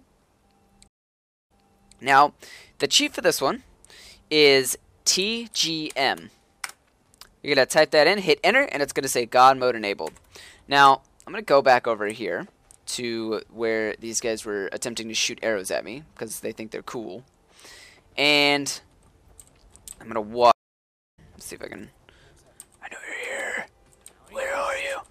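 There are two stream reconnect dropouts. At 0.88 s the audio cuts out for about 0.57 s, then comes back 0.52 s earlier than where it stopped, so you hear a short stretch repeated as the server resends a burst. At 20.52 s there's a 0.62 s gap, and this time it resumes roughly half a second later, skipping material. Both sound like a broken connection followed by a fresh decoder starting mid-stream, with a faded-in first frame.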